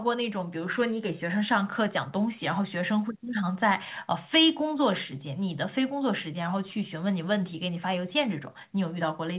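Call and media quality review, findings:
No faults found in the speech. The call path passes it as expected, with nothing above 4 kHz, which points to a narrowband codec such as G.711.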